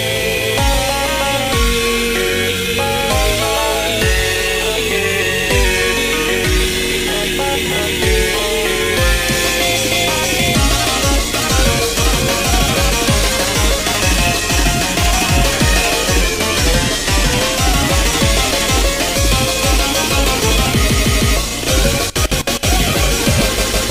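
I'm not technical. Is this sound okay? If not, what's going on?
No. From 3.40 to 5.64 s the sound runs about 6% fast and a semitone sharp, then from 16.21 to 17.59 s about 6% slow and a semitone flat, likely a drift correction step.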